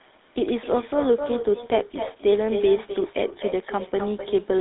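A quieter, thinner copy trails every phrase by about a third of a second, sitting roughly 11 dB below the direct sound and running from start to finish. This is echo with no canceller: the far end is playing the call through a loudspeaker, its microphone picks that playback up, and because nothing subtracts it, the sound returns after the network round trip as a faint, delayed shadow.

For the whole clip the speech also has a buzzy, gravelly roughness, and the codec damage is plainly audible. Nothing reaches above 3.8 kHz, and the line band runs from 250 Hz to 3.7 kHz, so the audio sounds boxed in and lacks both sparkle and body. This points to the GSM full-rate codec, at a rate that fits 13 kbps. It models the voice as a filter excited by regularly spaced pulses and keeps only a decimated excitation, which produces that grainy texture. The upstream call microphone processing only trims the lowest bass, which is normal, so the band limit is imposed here by the codec.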